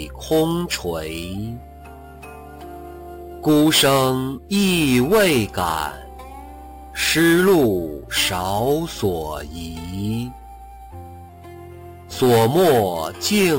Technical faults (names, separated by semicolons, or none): imaging from sample-and-hold upsampling